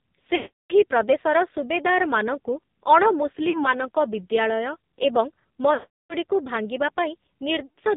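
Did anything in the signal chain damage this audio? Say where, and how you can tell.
Yes. Heavy AMR narrowband mobile codec damage at the codec stage runs through the whole clip. Nothing above 4 kHz survives, and the speech sounds buzzy and synthetic, which fits a low AMR-NB mode around 5.9 kbps, where a few pulses per subframe drive a vocal-tract model.

Lost AMR speech frames in the network stage occur at 0.36–0.85 s, 3.50–3.65 s, 5.74–6.15 s and 7.66–7.77 s. The decoder repeats the last good pitch and vocal-tract settings at falling gain, so the two longer gaps smear and fade to silence, while 3.50 s is only a brief dip.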